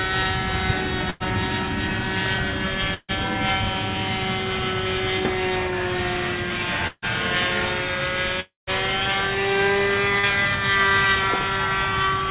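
At 1.10 to 1.23 s, 2.94 to 3.17 s and 6.87 to 7.05 s, the sound stretches into a held, fading buzz or hiss and then jumps ahead. These are bursts of packet loss: the receiver extended the last sound for about 100 to 150 ms, and the gap's own audio is gone. The second and third bursts end in roughly 30 ms of silence before the audio resumes.

From 8.40 to 8.70 s, a fading continuation gives way to about 150 ms of silence before the sound returns with roughly 270 ms missing, likely a long network dropout.

At 10.20 s a brief smear appears. This is short concealed packet loss: about 30 ms was filled by extending the preceding sound.

Throughout, nothing above 4 kHz is present, which points to a narrowband telephone codec on the call path.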